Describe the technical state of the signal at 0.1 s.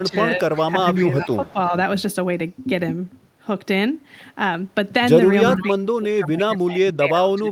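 At 0.1 s the speech sits inside a brief dip, from 0.03 to 0.18 s, where its level sinks by around 10 dB for roughly a tenth of a second in total before recovering. This is speech suppressed in double talk, likely from both ends talking at once: the echo canceller can't tell the near talker apart from loudspeaker echo, so it attenuates everything, pulling the wanted speech down along with the echo.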